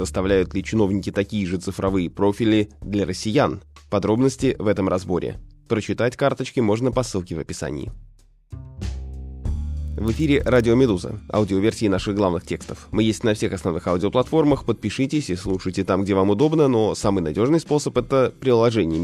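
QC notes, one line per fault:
9.88 to 10.71 s, filter restarted on every block: a buzz at 25 Hz rides on the sound, rising and falling with its level. The filter state is cleared at each block boundary, so every 40 ms block starts with a small transient.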